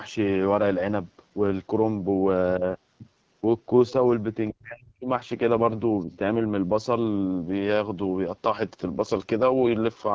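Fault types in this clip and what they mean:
AMR wideband (HD Voice) codec: Throughout the speech there is a rough, raspy edge and a hiss-like top band, the sound of a wideband speech model that rebuilds the upper range from shaped noise. The harshness fits one of its lowest modes, around 8.85 kbit/s. It differs from narrowband phone coding, which cuts off near 3.4 kHz. Here the band reaches about 7 kHz, and the call's microphone processing leaves nothing above 8 kHz.
Other side's voice leaking through: A faint second voice appears briefly from 3.9 to 4.1 s, roughly 30 dB below the main talker, and again as a tiny scrap from 6.0 to 6.05 s, roughly 40 dB down. This is likely loudspeaker sound that the echo canceller did not fully remove from the microphone. It differs from crosstalk or background chatter because it arrives only in short fragments rather than as a continuous layer.
Speech suppressed in double talk: From 4.5 to 5.09 s the main speech sinks sharply, by as much as roughly 40 dB, for about half a second in total. 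A brief, shallow dip of around 5 dB follows at 6.05 to 6.1 s, straight after the second leak. The likely cause is an echo canceller turning the talker down while both sides spoke at once. It differs from a dropout or packet loss because the sound is attenuated rather than replaced by silence or glitches.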